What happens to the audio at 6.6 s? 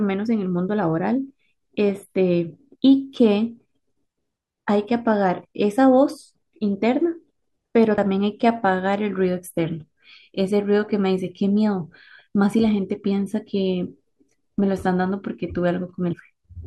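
Nothing goes wrong at 6.6 s; the speech carries on intact through that moment with no dropout, click, glitch or other fault.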